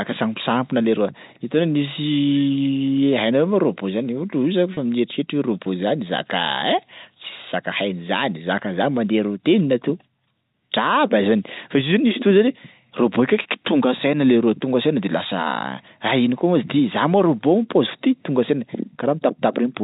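The clip is speech carried over a telephone-style link, band-limited to 4 kHz as G.711 coding would leave it. Just after "io zany", at 4.74 s, there is a packet loss with pitch repetition lasting 30 ms, to 4.77 s. The gap fits a single lost packet. The receiver filled it by repeating the last pitch period. Because the loss is short, it comes across as a brief held, buzzy tone before normal speech resumes.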